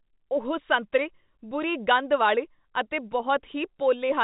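No technical faults can be heard in this speech clip, which carries the narrow, band-limited sound of G.711 telephone coding.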